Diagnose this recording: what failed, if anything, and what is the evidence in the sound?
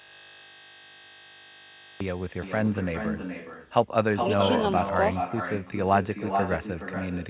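System hang loop at the driver or buffer stage: the host froze while one 20 ms buffer kept replaying, turning 0 to 2.00 s into a steady 50 Hz buzz.

Echo with no canceller, a call-processing failure: the far-end microphone picks up its loudspeaker, so the speech returns about 0.4 s later, about 6 dB quieter, throughout.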